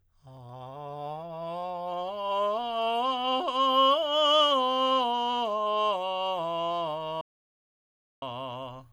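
At 7.21 s the music stops dead in an audio dropout to silence lasting about 1.01 s, resuming at 8.22 s, likely from a lost input while recording continued. The gap shows as a flat line on the waveform and a fully empty spectrogram band.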